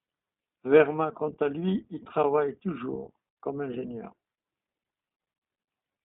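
The iLBC codec is at work from start to finish. Each short frame, consistent with 20 ms blocks at a rate that fits the 15.2 kbps mode, has its excitation coded independently of the one before, so the speech comes through intelligible but plainly rough and synthetic in texture. The line band runs from 200 Hz to 3.6 kHz, nothing reaches above 3.8 kHz, and the voice sounds thin, boxed-in and telephone-like.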